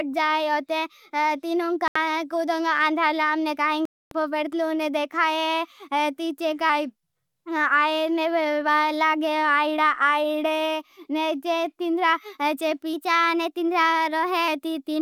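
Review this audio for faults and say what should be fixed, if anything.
Two dropouts cut the speech to silence, from 1.88 to 1.96 s (77 ms) and from 3.85 to 4.12 s (259 ms), with the audio resuming where it left off. These are likely Bluetooth stalls: radio interference delayed packets, the receiver's buffer emptied, and playback halted until retransmissions arrived. Keep the source close to the headphones, away from 2.4 GHz congestion, and use a larger receive buffer if latency allows.

Two passages change speed and pitch together, then snap back. From 6.69 to 7.44 s the speech slows by 6.38% and drops about 114 cents, roughly a semitone flat. From 12.93 to 14.48 s it speeds up by 6.38% and rises about 107 cents. These are likely drift correction steps, where clock-matching software abruptly changed the playback rate to rebalance its buffer. Use gradual, sub-audible resampling adjustments rather than single large rate steps.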